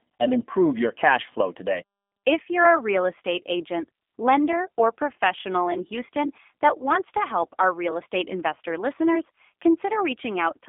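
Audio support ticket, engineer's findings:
Speech thin, boxy and slightly rough throughout, with a synthetic edge. Nothing above 3.6 kHz; usable band roughly 200 Hz to 3.5 kHz, telephone-style. Component: G.729 codec, character points to the G.729A variant at around 8 kbit/s. Mechanism: speech rebuilt from filter, pitch predictor and sparse pulses per 10 ms frame; plainly audible coding damage.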